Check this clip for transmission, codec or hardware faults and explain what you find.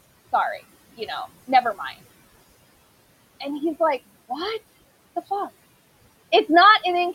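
One fault is present, noise suppressor artifacts, running through the whole clip. The room noise, sitting about 20 dB below the speech, is part of the recording rather than a fault, but it is what the suppressor acts on.

Noise suppressor artifacts, throughout: the suppressor estimates the steady room noise and attenuates the bands it assigns to that noise frame by frame, here by about 19 dB. The background drops away in the gaps between words and rises back up underneath them.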